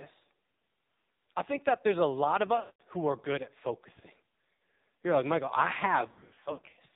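Throughout, the speech passes through the AMR narrowband mobile codec at heavy compression, consistent with a bitrate near 5.9 kbps. Its 8 kHz sampling cuts everything above 4 kHz, and its vocal-tract model and sparse pulse excitation leave a buzzy, synthetic, muffled voice.

Lost AMR speech frames follow, where the decoder stretches the last good frame and lets it decay. From 2.60 to 2.81 s, 200 ms goes missing: the sound smears, then fades toward silence. A short 60 ms loss near 4.54 s dips briefly. Between 6.08 and 6.79 s, scattered gaps of up to 80 ms make the voice warble.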